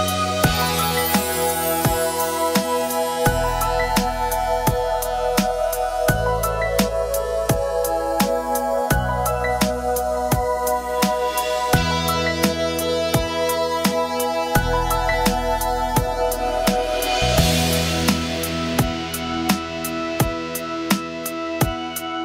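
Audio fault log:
No faults heard anywhere in this clip.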